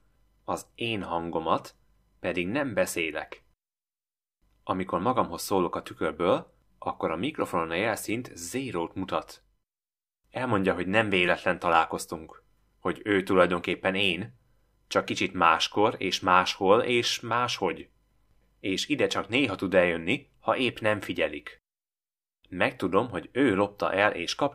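A repeated buffer occurs at 11.26 s. The playback device ran short of fresh audio and filled the gap by replaying its most recent block, about 5.8 ms long, which fits a 256-sample buffer. That block plays three extra times, each joined to the next with a hard edge. Because each repeat is so short, the effect comes across as a brief buzzy click in the speech rather than a clear stutter, and roughly 20 ms of audio goes missing.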